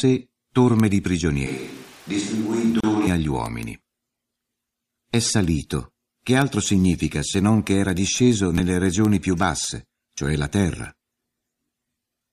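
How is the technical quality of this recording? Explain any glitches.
The recording has two technical faults, both early in the clip.

From 1.47 to 3.07 s there is a switch to a distant microphone. The sound turns roomy and hollow and loses bass. It drops about 5 dB, and background noise rises to roughly 25 dB below the speech. The close microphone's signal likely failed, leaving a farther one. Both changes are sudden.

At 2.80 s there is a gap at a join of encoded pieces, lasting 31 ms. Two separately encoded sections were joined untrimmed, so encoder delay and end padding remain as silence. The sound cuts out abruptly, with smeared edges, then resumes where it stopped.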